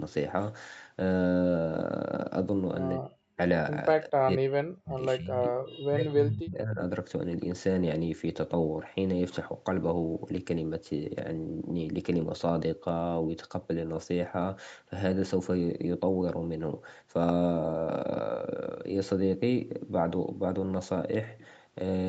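The speech ducks at 2.99 to 3.38 s, 3.94 to 5.01 s, 5.18 to 5.58 s and 5.9 to 6.81 s. It is likely speech suppressed in double talk, with drops of tens of decibels.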